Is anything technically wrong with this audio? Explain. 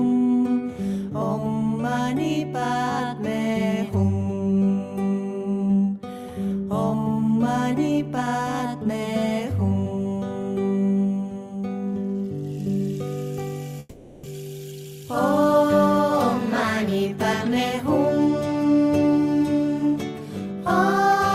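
Yes, there are two faults, close together.

From 13.79 to 14.27 s the sound smears into a fading buzzy continuation of what came before, then resumes further along with roughly 0.4 s of material gone. This is likely a long network dropout, with the receiver's concealment filling the gap.

From 14.85 to 15.43 s the sound runs slightly rushed, about 5% fast, at unchanged pitch. This is a jitter buffer speed-up: the receiver trimmed short pitch-period slices, roughly 40 ms in total, to drain a backlog of buffered audio.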